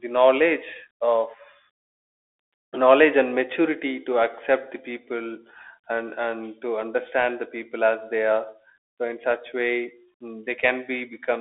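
Throughout, a Bluetooth CVSD headset codec's one-bit adaptive delta coding confines the speech to 300 Hz–3.5 kHz, making s sounds scratchy over a granular hiss.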